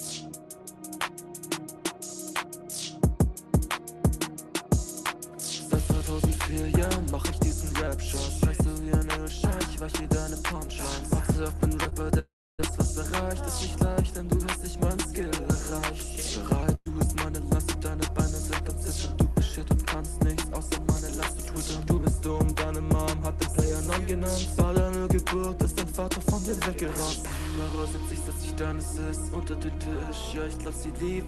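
Short concealed packet loss at 11.83–11.87 s and 11.89–11.93 s: about 20 ms each went missing, and the receiver extended the preceding sound, leaving brief smears. A long network dropout at 12.19–12.61 s is the likely cause of the next gap. About 0.4 s never arrives, so a fading buzz or hiss gives way to silence before the sound resumes further on. A burst of packet loss at 16.75–16.88 s removes about 120 ms, heard as the last sound held and fading before the audio jumps ahead.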